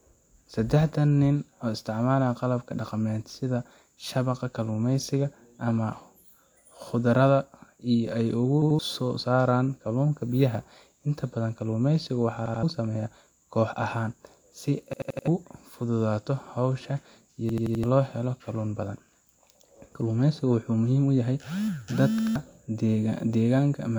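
At 8.62 s (after "si ay"), 12.46 s (between "badan kalluumaysiga" and "sameeyaa koox"), 14.93 s, 17.49 s and 22.19 s, fresh audio failed to reach the output in time and the device replayed its last buffer, a repeated buffer fault. Each piece is about 85 ms long, which fits a 4096-sample buffer. It sounds two extra times at 8.62, 12.46 and 22.19 s and four extra times at 14.93 and 17.49 s, giving a hard-edged stutter. Roughly 150 ms and 300 ms of speech are lost respectively.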